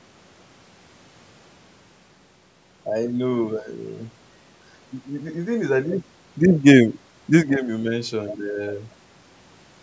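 No technical faults can be heard anywhere in this speech. The call microphone processing trims away the lowest bass and leaves nothing above 8 kHz, as expected for that path.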